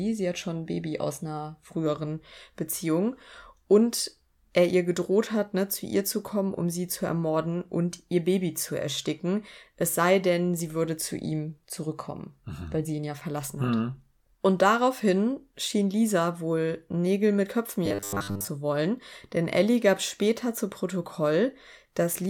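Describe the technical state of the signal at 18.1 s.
Audio likely arrived too seldom, so a buffer fitting 10 ms kept repeating from 17.86 to 18.48 s, before "wollen denn": robotic sound from repeated short buffers, a rigid, metallic 100 Hz buzz.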